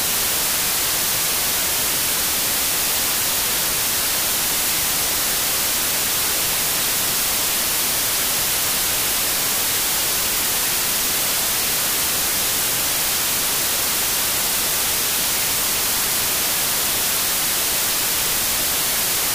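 From start to finish the audio suffers from wrong sample width. It plays at half speed, so everything sounds an octave low and drawn out. A loud hiss sits over the whole clip. The sound underneath is buried. This fits data written as 32-bit integers but read as 16-bit ones. Each true sample splits into two values. One keeps the signal's top bits. The other carries only low-order bytes, heard as noise.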